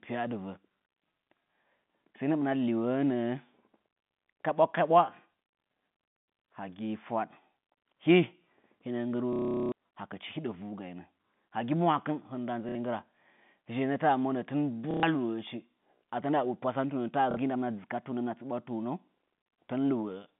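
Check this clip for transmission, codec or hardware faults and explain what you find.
There is one kind of fault: packet loss with the last packet repeated. It happens four times in this speech, which comes over G.711 mu-law telephone coding with a band of about 150 Hz to 3.6 kHz.

The dropouts fall at 9.33 to 9.72 s (390 ms), 12.69 to 12.75 s, 14.91 to 15.03 s just after "monə tɨn", and 17.31 to 17.37 s. Each time, the receiver loops the last packet it received. The repeat period fits 30 ms packets. The loops are out of step with the pitch. The long gap buzzes at about 33 Hz, a robotic stutter.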